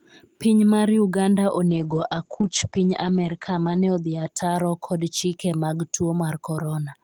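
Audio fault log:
1.69–5.61 s, call bitrate drop. The speech turns rough and watery, and the top end above 8 kHz vanishes, down from 20 kHz. That fits a fall from 64 to about 11 kbps. The encoder codes coarsely. It stays worst for 1.85 s, then recovers.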